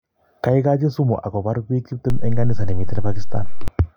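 At 2.10 s, just after "kaigachi sumuakopar piik", a DC step occurs. The waveform's zero line jumps by about -12 dBFS and holds. It returns at 3.68 s. Each shift gives a low thump, while the speech carries on unchanged.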